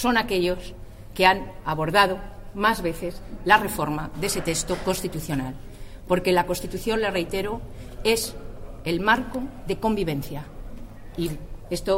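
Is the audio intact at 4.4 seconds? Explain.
Yes, the audio is intact at 4.4 seconds, with no dropout, click, distortion or other fault at that moment.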